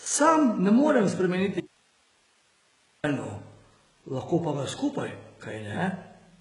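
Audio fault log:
throughout: HE-AAC compression. The speech carries heavy codec damage, with nothing above 11.1 kHz and a treble band that sounds synthetic rather than captured. The likely cause is HE-AAC at a very low rate, which fits about 12 kbps: only the lower spectrum is coded, and the top is rebuilt by copying lower bands upward under a coarse envelope. Unlike plain low-bitrate AAC, which simply goes dull, the treble stays present but misaligned, so sibilants turn gritty and metallic.
1.61–3.04 s: audio dropout to a faint residue. The speech cuts out abruptly for 1.43 s, leaving only hiss at roughly 40 dB below the signal, then returns just as suddenly. The likely cause is a loss of the wanted signal while the path after the break stayed live, so its own noise floor carried on through the gap. A natural pause or a fade would ease in and out, and a full mute would leave no hiss.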